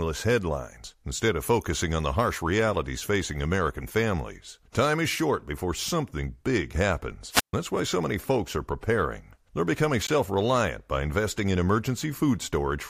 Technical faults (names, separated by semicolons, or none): wireless microphone squelch dropout